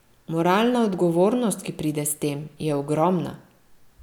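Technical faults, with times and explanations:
Nothing technical gets in the way here; the speech comes through without a single glitch, dropout or hiccup to point to.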